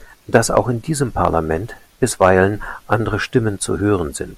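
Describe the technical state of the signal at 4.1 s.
At 4.1 s the audio is intact, with no audible fault in the signal at that moment.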